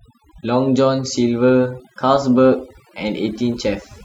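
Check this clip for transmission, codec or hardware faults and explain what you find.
One fault runs through the whole speech clip: overdone noise removal. Noise reduction set too strong cuts bands near its noise estimate, leaving a lowered background that breaks up into twinkling specks.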